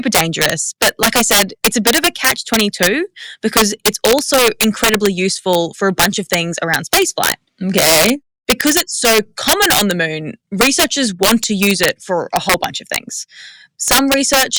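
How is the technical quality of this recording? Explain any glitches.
The recording is marred by integer overflow running through the whole speech clip. Somewhere in the chain a gain or summing stage pushed the signal about 8 dB past full scale, and instead of being held at the limit, each sample beyond the largest integer value wrapped around to the opposite extreme. Only around one percent of samples cross that line, but every one swings across the entire range, so the loudest moments erupt into violent, harsh cracks, far sharper and more abrupt than ordinary clipping.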